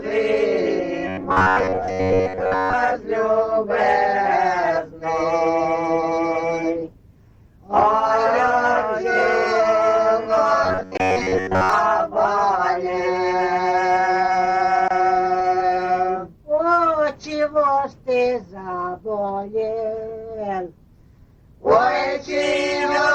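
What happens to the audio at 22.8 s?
Nothing goes wrong at 22.8 s; the audio plays through that moment intact, with no dropout, click or other fault.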